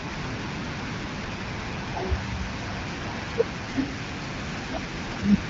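Nothing stood out on listening to this speech, which comes through an AMR wideband (HD Voice) path at 12.65 kbit/s.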